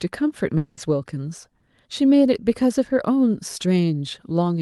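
From 0.57 to 0.79 s the speech smears into a buzzy, fading continuation of the last sound, then resumes abruptly with about 200 ms gone. This is likely a long network dropout, with the receiver concealing the gap over the call's 12 kHz Opus audio.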